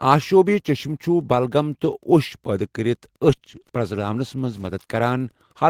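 A speech clip with two packet-loss faults close together. From 3.27 to 3.71 s there is repeated packet loss, giving a choppy, robotic sound. Packets kept going missing or arriving late across this stretch. Some holes were patched by stretching the previous sound, about 80 ms in all. Another 80 ms is simply missing. The longest single gap is about 20 ms. The damage ends just before "پرزلاونس منٛز". Then, from 4.61 to 4.71 s, right after "پرزلاونس منٛز", comes a lost packet rebuilt from error correction. The sound points to three lost packets, about 60 ms together. Each was replaced by a low-bitrate copy carried in the next packet, so nothing drops out. Those frames sound rougher and noisier.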